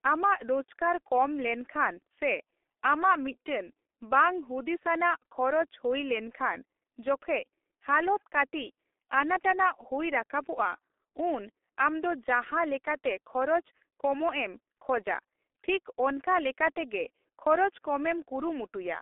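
Throughout, the speech passes through a G.723.1 codec at heavy damage, squeezed into a 300 Hz to 3.5 kHz line band with nothing above 3.8 kHz and a slow-updating voice model, which fits a bitrate near 6 kbit/s. It sounds muffled and hoarse, with smeared consonants.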